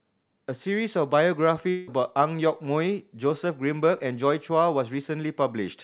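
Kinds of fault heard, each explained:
Long network dropout: at 1.70 s the speech turns into a fading buzz or hiss lasting 0.17 s, then resumes with a piece gone, likely from audio lost in transit.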